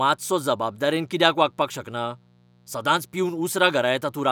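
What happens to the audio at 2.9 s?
At 2.9 s the speech carries mains buzz, present across the whole clip rather than only at that moment. Sharp switching spikes tied to the 60 Hz supply arrive twice per cycle, 120 times a second, spreading harmonics up into several kHz. It sits faintly beneath the speech as a steady, raspy buzz. A plain mains hum would be a smooth, dull low tone, but here the spiky edge and bright upper harmonics give it a rasp.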